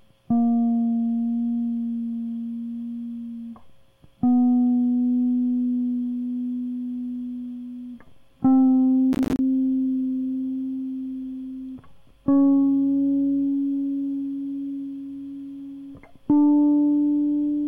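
From 9.13 to 9.39 s the music breaks into a quarter-second burst of gritty crackle, a rapid stutter of tiny dropouts with hard edges that tears through the sound and then stops. This is processor overload crackle: the processor fell behind and missed a run of buffer deadlines, each lasting around 10 ms, about fifteen in all. Every missed buffer came out as a short slice of silence, and those abrupt holes in quick succession make the crackle.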